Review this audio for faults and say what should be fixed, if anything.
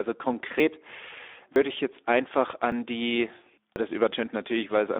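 The speech was encoded with the Speex codec at 11 kbps. At that rate the CELP coder has too few bits to model the excitation, so the speech throughout sounds grainy and hoarse, with plainly audible codec damage. The line band runs from 300 Hz to 3.6 kHz, and nothing is heard above 3.6 kHz, so sibilants and breath are dull and muffled. To prevent this, send the speech through a wideband codec such as Opus at a higher bitrate.

At 0.6 s, 1.56 s, 2.72 s and 3.76 s the recording side likely failed to read its input buffer before the hardware overwrote it. Each of these dropped buffers (overruns) loses a piece of audio and splices the two sides together directly. There is no gap. Each event is a sudden jump forward in the speech. About 70 ms is lost at 0.6 s and at 1.56 s, just before "ich jetzt einfach". About 40 ms is lost at 2.72 s, right after "ich jetzt einfach", and about 100 ms at 3.76 s. 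To prevent this, enlarge the capture buffer or give the audio thread higher scheduling priority so it always collects its samples in time.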